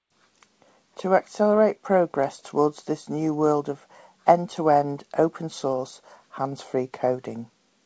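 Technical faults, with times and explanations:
No faults are present; the speech passes through a WebRTC call path with G.722 coding, which leaves nothing above 8 kHz.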